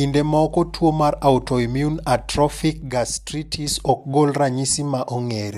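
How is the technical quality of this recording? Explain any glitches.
There's one glitch in the speech, a sudden gain jump. At 2.82 s the level drops by about 6 dB in a single step, and it stays down until 3.67 s, when it snaps straight back up. The speech and the background noise fall and return together, which tells you the whole signal was scaled. The likely cause is a digital gain setting applied instantly instead of being ramped in, so the level shift lands between one sample and the next.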